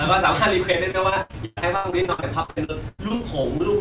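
Speech, from 0.72 to 3.61 s, turns choppy and robotic with clipped fragments: repeated packet loss, with about two dozen gaps each patched by stretching the previous sound, heard over a narrowband call path with nothing above 4 kHz.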